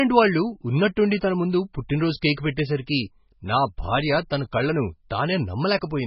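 MP3 compression damage runs through the whole clip. Everything above about 5.6 kHz is missing, which points to a very low bitrate, around 16 kbps, at which the encoder likely dropped the treble to save bits. The speech sounds muffled and dull. With so few bits, weak frequency components flicker in and out between frames, giving heavy watery, swirling artefacts, metallic chirps on s sounds, and smeared consonant attacks.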